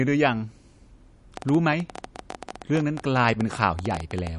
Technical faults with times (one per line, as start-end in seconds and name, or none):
0.00-4.39 MP3 compression
1.37-4.28 train of clicks